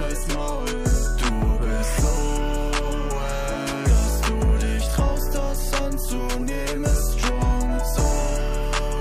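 Nothing here calls for comment, since the audio runs along without a single technical fault turning up anywhere in it.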